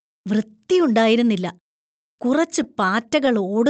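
Between 2.63 and 3.38 s the speech has scattered short gaps: around seven brief packet losses, each roughly 10 ms or less, patched by extending the preceding sound. Unlike one longer dropout, these are tiny ticks and smears spread thinly across the Opus-coded, 8 kHz-band audio.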